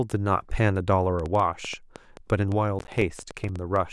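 It's a speech clip with a train of clicks from 1.20 to 3.77 s: around fifteen irregular pops, about 6.2 a second, spiking roughly 10 dB above the speech, likely outside interference. From 2.79 to 3.49 s there's processor overload crackle, with around ten short dropouts to silence, which fits missed buffers of roughly 10 ms.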